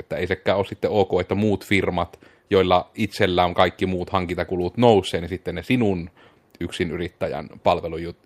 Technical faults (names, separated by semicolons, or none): none